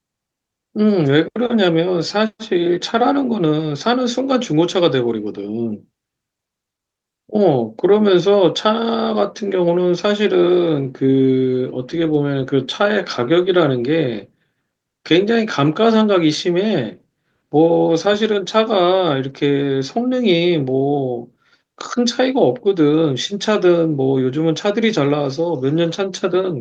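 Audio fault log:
No faults were heard in this speech recording. Nothing in it calls for a timed entry.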